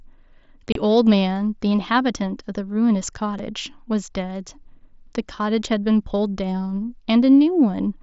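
At 0.72 s a 30 ms hole, which fits several consecutive 7.5 ms packets, and at 3.39 s a single 7.5 ms gap show unconcealed Bluetooth headset packet loss over the mSBC link. The gaps are holes with hard, abrupt edges, not smoothed or filled as concealment would do.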